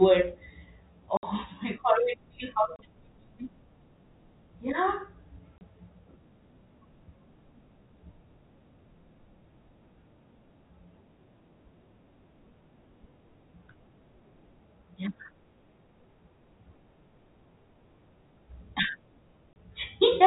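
Packet loss filled with silence cuts the speech four times: 1.17 to 1.23 s, 2.76 to 2.79 s, 5.58 to 5.61 s, and 19.53 to 19.56 s. The holes last 30 ms, and the first lasts 60 ms, which fits 30 ms packets with two lost in a row. The receiver put digital silence where the missing audio should have been, so each hole starts and ends abruptly. On a waveform each one is a flat line with vertical edges. On a spectrogram it is a blank column with sharp edges.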